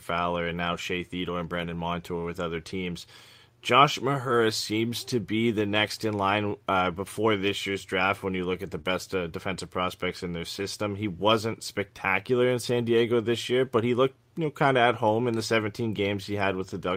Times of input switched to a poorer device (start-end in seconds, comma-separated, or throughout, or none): none